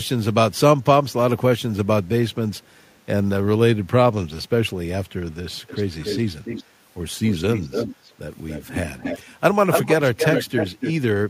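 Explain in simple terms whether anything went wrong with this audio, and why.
Echo leak: a delayed copy of the speech trails the talking at 2.57–2.98 s (very faint, about 0.33 s behind), then at 5.67–5.83, 6.0–6.2, 6.44–6.64, 7.23–8.12, 8.5–9.34 and 9.71–10.93 s (about 0.29 s behind). After 6 s it grows until it is nearly as loud as the speech. The likely cause is a call on a loudspeaker whose echo canceller missed part of the sound its microphone picked back up, sending that leftover sound back down the line.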